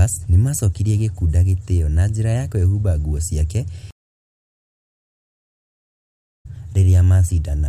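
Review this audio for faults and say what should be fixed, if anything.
Stream reconnect, 3.91 to 6.46 s: the connection broke and a new decoder restarted mid-stream, leaving 2.5 s of silence before the speech resumes roughly two seconds further on. A deeper client buffer with automatic retry, plus resuming from the last received position, would bridge such drops without losing audio.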